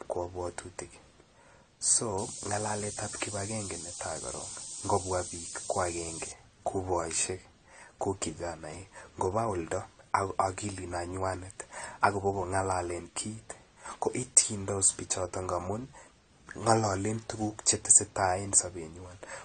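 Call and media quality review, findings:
Throughout: dull, smeared speech, with nothing above 9 kHz and a warbling, fizzy texture on sibilants and sustained vowels. Codec damage plainly audible. Likely AAC compression (AAC-LC) at a low bitrate, consistent with about 32 kbps. The encoder lowers its cut-off and quantises coarsely against the hearing model, leaving spectral holes and substitute-noise bands that smear the sound.

2.18–6.32 s: steady, thin hiss rising sharply toward the top of the band, about 5 dB louder than the speech. Low bit depth with noise shaping, consistent with about 5 bits. Rounding error from the coarse quantisation is fed back and pushed upward in frequency, which concentrates the noise in the treble.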